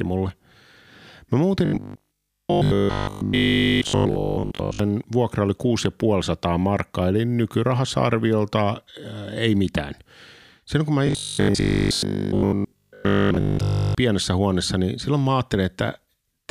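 Robotic sound from repeated short buffers, 1.65–4.79 s before "vuokra oli", and 11.07–13.95 s between "kun mä" and "pienessä huoneessa niin silloin". A rigid 50 Hz buzz replaces the speech, likely from a 20 ms buffer repeated throughout.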